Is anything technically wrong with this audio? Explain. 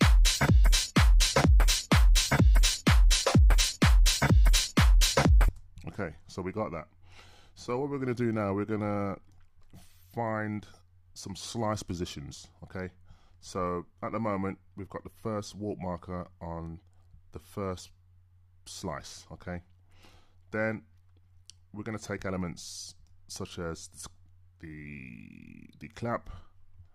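No, no technical faults heard.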